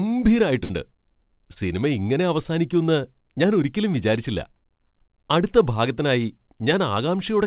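From 0.64 to 0.71 s there is a burst of packet loss: a run of packets failed to arrive in time. The receiver extended the last sound for about 52 ms, fading it down, and then resumed with roughly 60 ms of the speech skipped.

At 1.53 to 1.58 s, just before "സിനിമ ഇങ്ങനെ അവസാനിക്കുന്ന് ഞാൻ", a short concealed packet loss occurs. About 20 ms of audio never reached the decoder, which filled the hole with about 27 ms of continued sound before blending back, leaving a brief smear. The G.711 call path stops everything above 4 kHz.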